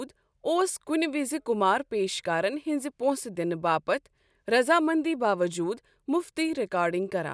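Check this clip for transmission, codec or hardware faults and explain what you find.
Nothing in this speech recording points to a fault. There are no events to time or explain.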